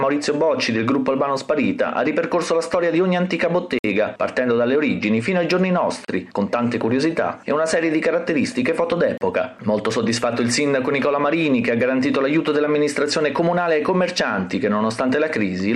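Three brief dropouts to complete silence interrupt the audio: about 57 ms from 3.79 to 3.85 s, then about 34 ms each from 6.05 to 6.08 s and from 9.18 to 9.21 s. Each time the sound resumes abruptly after the gap. These are likely Bluetooth stalls, in which radio interference delays packets, the headphones' buffer empties, and playback halts until retransmitted data arrives.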